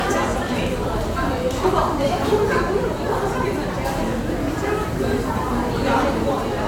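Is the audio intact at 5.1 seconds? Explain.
Yes, the audio is intact at 5.1 seconds, with no dropout, glitch or other technical fault at that moment.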